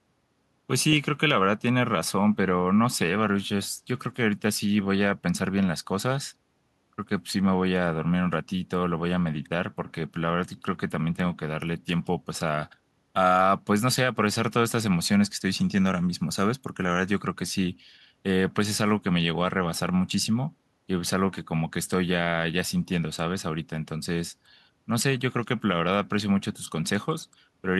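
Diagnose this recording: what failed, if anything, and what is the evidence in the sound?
Listening through the speech, nothing stood out as a failure at any stage of the chain.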